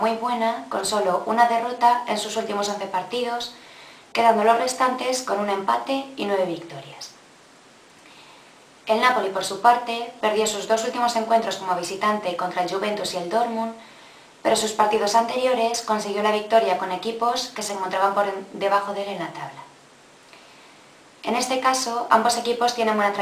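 No technical fault can be heard anywhere in this audio. Nothing in it calls for repair or correction.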